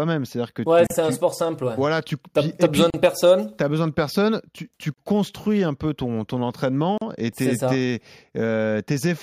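Speech pieces about 2 s long were encoded separately and joined untrimmed, so each join leaves a gap at a join of encoded pieces: a silence of roughly 35 to 38 ms at 0.87 s (after "que ouais", before "c'est un sport simple"), 2.90 s, 4.94 s (before "construis un peu ton") and 6.98 s (after "un peu ton ton").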